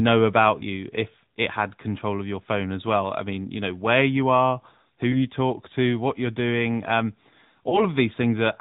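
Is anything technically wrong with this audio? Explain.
Yes. Throughout, the speech was squeezed through the AMR narrowband mobile codec, which models the vocal tract and discards everything above 4 kHz, leaving a muffled, plainly buzzy, synthetic tone that fits a mid-rate mode of about 10 kbps. Lost AMR speech frames at 5.12 to 5.27 s and 7.70 to 7.82 s made the decoder patch each gap from the previous frame at reduced gain. Each sounds like a brief dip or warble, consistent with a single missing 20 ms frame, before the speech briefly returns rough.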